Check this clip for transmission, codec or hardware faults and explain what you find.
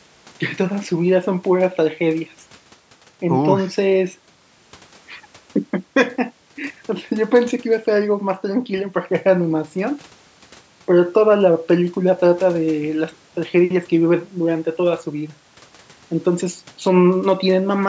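One fault shows up in this speech clip, a single DC step at 8.78 s. The waveform's zero line jumps suddenly, and a 2 Hz high-pass then slowly pulls the offset back toward zero. You hear one low thump, while the talking carries on unchanged. The band stops at 8 kHz, which fits the call's microphone processing.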